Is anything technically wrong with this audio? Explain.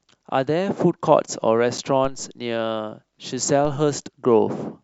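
Yes, there are two kinds of technical fault in this speech clip.

At 1.78 s a brief hole of about 8 ms cuts through the speech. It is silent and has hard edges, so it registers as a tiny tick or stutter. This is a gap between stream segments. The stream is delivered in 4.0 s segments, and the timestamps at one boundary leave a short gap that the player fills with silence. No speech is lost; the rest of the audio simply arrives slightly later.

At 2.05 s and again at 3.65 s there is a low thump or click underneath the speech, which carries on unchanged. Each one is a DC step: the waveform's zero line suddenly jumps to a new offset, as happens when a converter recalibrates or an offset input is switched in. The offset then decays away behind a high-pass filter around 2 Hz, over a fraction of a second, so only the sudden jump itself is audible.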